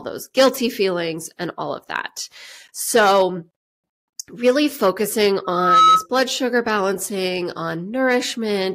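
A speech recording with a loudspeaker feedback squeal from 5.44 to 6.06 s. A steady 1.3 kHz tone swells over about a third of a second, peaking roughly 10 dB above the speech. The microphone is picking up its own loudspeaker, and the loop runs away at that frequency.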